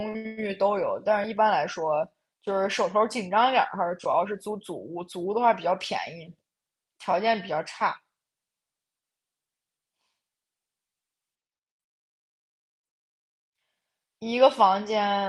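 No audible technical faults.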